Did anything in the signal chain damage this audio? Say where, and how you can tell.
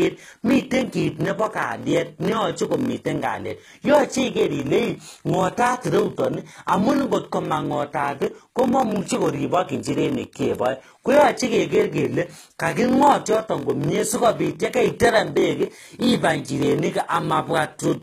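Yes. At the driver or buffer stage there is a block size mismatch (padded) throughout: a steady 43.1 Hz buzz and speech running at 0.938 times normal speed without dropping in pitch. That fits a 1024-sample read block only partly filled, with zeros closing each gap. A sample-rate mismatch would lower the pitch too.

At the codec stage, the treble sounds synthetic throughout: s sounds are gritty and metallic, and upper harmonics don't line up with the lower spectrum. The likely cause is HE-AAC compression at a low bitrate around 20 kbps, rebuilding the top band by replication. Plain low-pass codec damage would sound dull instead.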